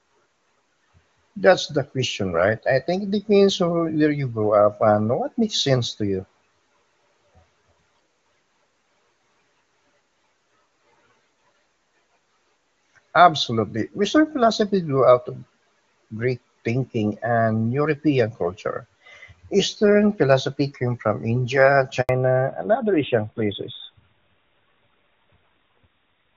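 At 22.01 s the speech cuts out in a handover gap lasting 80 ms, until 22.09 s. The call was passed between networks and no speech frames arrived during the switch, so the sound drops to silence and whatever was said in that interval is missing.

From 22.09 s to the end, the call makes a fallback to narrowband. Everything above 4 kHz disappears, and the speech turns duller and rougher than the clear HD Voice sound before it. This fits a change from AMR-WB at its top rate to AMR-NB at 12.2 kbit/s.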